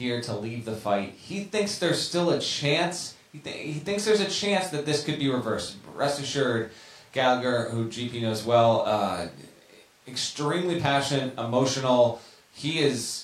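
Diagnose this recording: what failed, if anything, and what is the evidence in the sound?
Nothing failed; no fault is audible anywhere in this recording.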